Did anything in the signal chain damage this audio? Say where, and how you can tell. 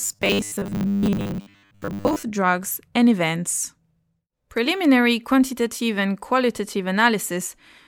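Yes: a likely buffer underrun repeats 10 ms chunks from 0.01 to 2.23 s, giving robotic sound from repeated short buffers, a rigid 100 Hz buzz before "drugs and events".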